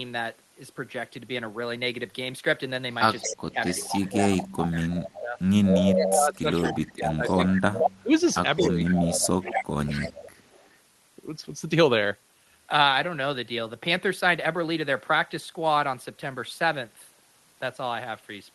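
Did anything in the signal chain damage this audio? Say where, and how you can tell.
Yes, in call processing. Echo leak: from 3.19 to 7.78 s and 8.33 to 10.77 s, a copy trails by a fixed 222 ms, likely from an incompletely cancelled loudspeaker, unlike diffuse reverberation.

Speech suppressed in double talk, 3.26 to 5.38 s and 5.93 to 10.11 s: the talker dips, dropping by up to about 20 dB, likely from the canceller ducking during overlap, not a steady level loss.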